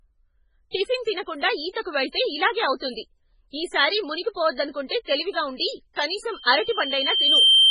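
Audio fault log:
Throughout: MP3 compression, likely the cause of the heavy watery, swirling quality across the speech. There is nothing above 10.5 kHz, and the damage points to a very low bitrate, around 16 kbps. With so few bits, the encoder discards weak frequency lines, and those lines flicker in and out from one frame to the next. This produces the unstable, underwater texture, while the fixed treble cut-off removes the top of the spectrum.
0.71–0.74 s and 1.82–1.86 s: pre-echo. Each of these attacks is preceded by a short hiss spread over roughly 35 ms, and the onset itself sounds smeared. The codec distributes its quantisation noise across a whole transform block. When a sharp attack arrives late in that block, noise sized for the loud part also fills the quiet stretch just before it, so the hiss is heard ahead of the attack.
6.31–7.71 s: loudspeaker feedback squeal. A single tone at 3.1 kHz swells over about a second and settles around 10 dB above the programme sound, continuing until the clip ends. 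The microphone is picking up the loudspeaker it feeds, and at 3.1 kHz the loop gain exceeds one. Each pass around the loop therefore reinforces that one frequency, and it grows on its own into a sustained squeal.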